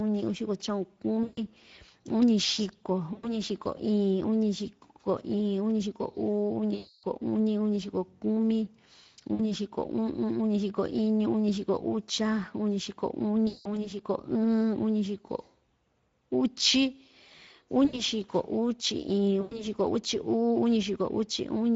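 Throughout this speech the voice sounds hoarse and grainy, with the upper band reduced to a noisy fizz: plainly audible Speex codec damage, consistent with a low-to-middle setting around 16.8 kbps that leaves too few bits to model the excitation cleanly. At 1.23–1.40, 3.13–3.40, 6.75–7.05, 9.33–9.41, 13.47–13.92, 17.85–18.02 and 19.41–19.67 s the voice smears into a stretched, fading sound and stays weak afterward. This is VoIP packet loss concealed by the speech codec: the decoder extrapolates from its last pitch and filter with decaying gain, then needs time to recover.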